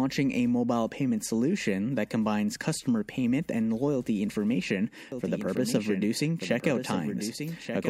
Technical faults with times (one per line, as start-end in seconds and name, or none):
5.12-7.90 doubled audio track